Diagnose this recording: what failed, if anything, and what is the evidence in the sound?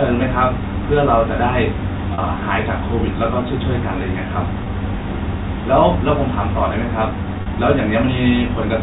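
Packet loss with pitch repetition at 2.14–2.18 s, 4.64–4.66 s and 7.42–7.46 s, a network fault. Each 40, 20 or 40 ms gap, which fits one or two lost 20 ms packets, is filled by repeating the last pitch period, so the G.711 telephone speech briefly sounds held and buzzy.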